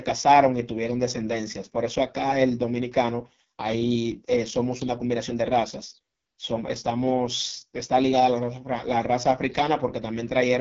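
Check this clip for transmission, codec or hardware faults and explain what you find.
There's one fault, and it runs the whole way through: the speech has gone through the AMR wideband (HD Voice) codec, and it's pretty badly mangled. The speech is modelled only up to 6.4 kHz, with shaped noise filling in above that, and nothing at all above 7.1 kHz. The rough, raspy texture fits AMR-WB's lowest rate, 6.6 kbit/s.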